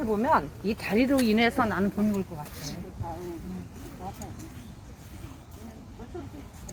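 Nothing goes wrong anywhere in these everyday sounds; there are no technical faults to pick out at any point in the recording.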